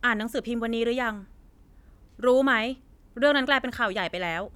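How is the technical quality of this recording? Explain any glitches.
No audible glitches or faults.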